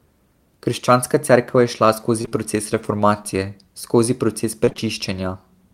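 Between 2.21 and 2.33 s come three back-to-back short concealed packet losses, each losing about 20 ms of audio, which fits 20 ms packets. The decoder extends the preceding sound and blends back, leaving a brief smear or wobble rather than sustained choppiness.

From 4.65 to 4.85 s, repeated packet loss gives a robotic sound. Four gaps, the longest 22 ms, mean roughly 44 percent of that stretch is patched. The rapidly recurring fills, not a single smear, create the choppy texture with pieces missing.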